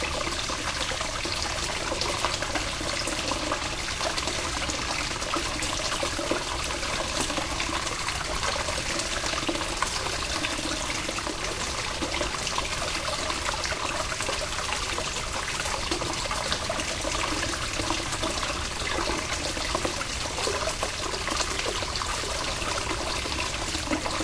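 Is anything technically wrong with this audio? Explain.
No, nothing is technically wrong with this audio.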